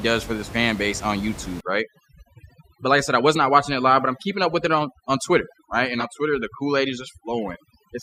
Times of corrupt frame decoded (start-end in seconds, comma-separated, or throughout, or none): 6.00-6.04